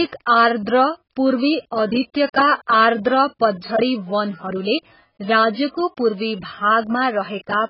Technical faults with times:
0.00-7.70 AAC compression
2.67 pre-echo

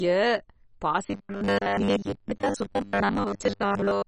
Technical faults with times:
0.00-4.08 MP2 compression
1.05-4.07 robotic sound from repeated short buffers

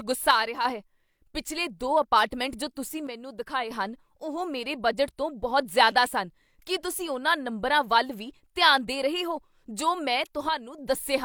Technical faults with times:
0.31-0.65 one channel drops out
3.07-3.71 one channel drops out
10.49-10.78 one channel drops out

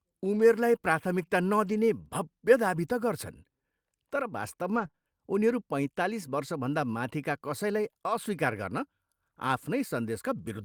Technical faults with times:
0.35-0.41 lost packet rebuilt from error correction
1.65-1.75 lost packet rebuilt from error correction
4.67-4.85 lost packet rebuilt from error correction
4.87-4.95 short concealed packet loss

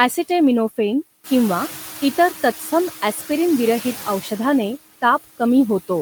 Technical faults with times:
0.00-6.02 noise suppressor artifacts

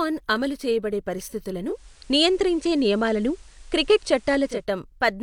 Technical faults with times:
1.65-4.67 digital radio blending to analogue

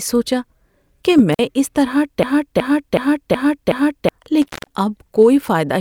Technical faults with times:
1.33-1.39 intermittent contact
2.23-4.09 system hang loop
4.42-4.73 intermittent contact

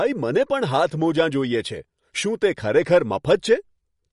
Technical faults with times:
0.00-4.12 MP3 compression

